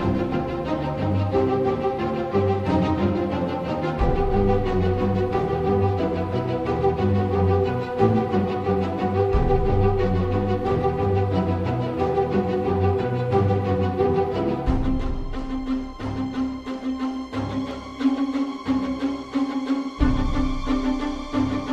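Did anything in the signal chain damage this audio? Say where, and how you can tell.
Yes. At 17.71 s there is a block of digital silence, a hole of about 0.67 ms heard as a single tick where the sound drops to zero and returns with no fade. That points to the driver or buffer stage: a short output block, consistent with a 32-sample buffer, went unfilled.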